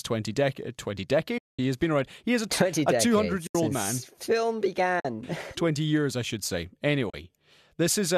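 Speech, with AAC frame loss with muting: four soft-edged holes at 1.38–1.59 s (210 ms), 3.47–3.55 s (80 ms), 5.00–5.05 s (50 ms) and 7.10–7.14 s (40 ms). In each, the decoder zeroed the spectrum of the missing frames, and the overlapping windows fade the sound out and back in. The gap lengths fit roughly 10 ms frames, consistent with the low-delay AAC likely carrying the stream, which itself adds only light coding roughness.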